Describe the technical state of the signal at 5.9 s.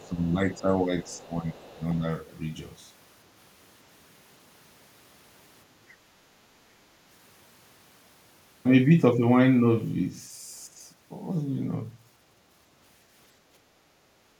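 At 5.9 s the speech signal is intact, with no dropout, clipping, glitch or other fault audible at that point.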